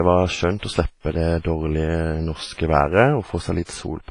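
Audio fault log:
Throughout, WMA compression: the speech has a ringing, washy quality, with a hiss that swells and fades with each phrase, and nothing is left above 10.5 kHz. This is likely the work of a transform codec with long blocks. Its quantisation noise smears across tens of milliseconds around each sound, and weak spectral lines drop out entirely. The damage is heavy, which fits a bitrate of around 24 kbps.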